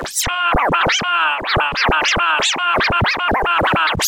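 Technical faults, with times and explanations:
Throughout: computer activity noise, a faint buzzing chirp pulsing at around 100 Hz and sitting roughly 45 dB below the sound. Shifting processor or graphics load drags the shared ground under the audio circuit, so interference leaks in and varies with what the computer is doing rather than with the sound. On a spectrogram it appears as a comb of evenly spaced vertical striations across the background; the waveform shows a low, regular ripple in quiet gaps.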